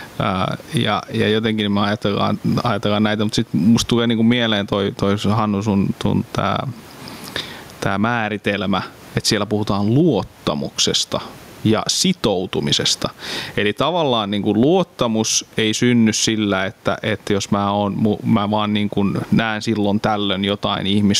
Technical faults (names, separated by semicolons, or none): gain pumping